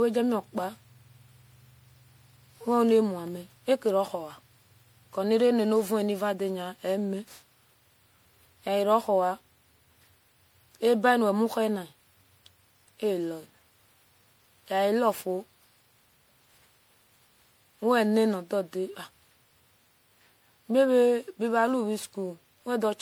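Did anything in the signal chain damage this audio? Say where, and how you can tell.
Yes, at the codec stage, throughout the speech: generation loss, likely from repeated MP3 encoding, around seven passes at what sounds like 96 kbit/s. Each re-encode requantises on a shifted frame grid, so swirly, hollow artefacts and smeared attacks pile up beyond that bitrate alone.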